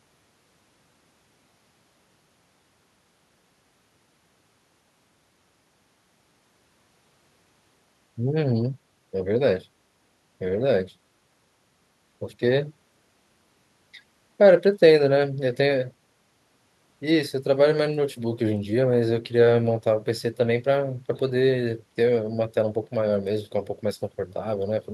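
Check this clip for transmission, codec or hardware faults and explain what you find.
Nothing here points to trouble in transmission, encoding or hardware; the speech comes across steady and intact, with no dropouts, glitches or noises to report.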